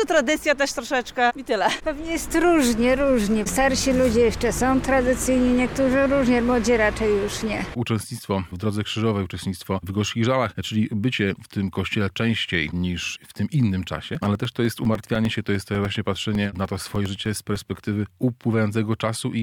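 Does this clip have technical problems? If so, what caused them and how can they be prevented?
Yes. Periodic USB or driver dropouts run from 14.15 to 17.86 s: every 0.1 s, a couple of milliseconds of sound is replaced by silence, giving a steady ten-per-second ticking. Something repeatedly stalls the USB bus or audio driver, briefly starving the audio stream. To prevent it, use a larger buffer and disable background tasks or power-saving features that poll the USB bus.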